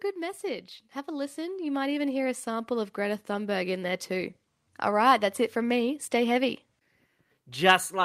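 Automatic gain rising runs from 0.13 s to 4.11 s in this speech recording. The gain control judged the input too quiet and lifted its level by about 9 dB over those four seconds, so the voice and the background noise swell together.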